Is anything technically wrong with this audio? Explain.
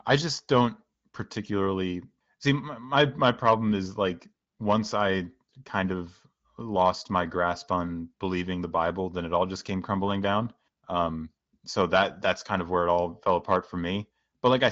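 No, nothing stood out as wrong on listening to this speech clip.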